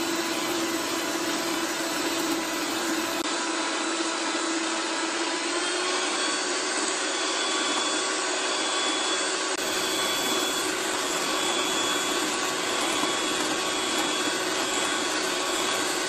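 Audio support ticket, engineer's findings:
Input switched to a poorer device, likely a fallback microphone or headset call profile, 3.22 to 9.58 s. Brief dropout of about 20 ms at the switch, 3.22 s. Narrower device passband: nothing above 10 kHz, so the sound turns dull and boxy. New background noise sits about 40 dB under the signal. No obvious level jump. Fuller top end returns at 9.58 s.

Adaptive stream at a lower bitrate, 10.62 s through end of clip. Player dropped to a lower rendition when the connection slowed. Sudden, gapless quality change. Top end cut off above 12.3 kHz, treble thin, codec artefacts rising. Character fits a step down from roughly 96 kbit/s AAC-LC to a 16 kbit/s HE-AAC stream.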